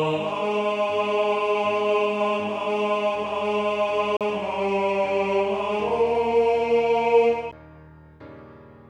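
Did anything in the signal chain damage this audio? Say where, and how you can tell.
Yes: playback-stage CD skips at 4.17–4.21 s and 7.51 s. Brief mutes, around 40 ms and 10 ms, resume elsewhere on the spiral, a positional jump that sets them apart from simple dropouts.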